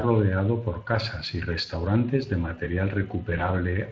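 A short speech recording carries plainly audible Speex codec damage throughout. The voice sounds noisy and hoarse, because the CELP coder cannot model the excitation exactly. The sound points to a mid-to-high Speex setting, roughly 20 kbps. From 3.37 to 3.49 s there is VoIP packet loss concealed by the speech codec. The decoder fills a gap, consistent with one lost 20 ms frame, by repeating its last pitch and filter at falling gain. The result is a brief stretched, fading sound, and the speech stays weakened afterwards.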